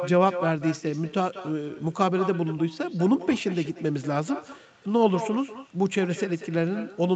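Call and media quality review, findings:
Echo with no canceller, throughout the speech: each phrase shadowed by a quieter, thinner copy about 13 dB down, roughly a fifth of a second late. Probable cause: far-end loudspeaker-to-microphone pickup returned over the network round trip, with no echo cancellation removing it.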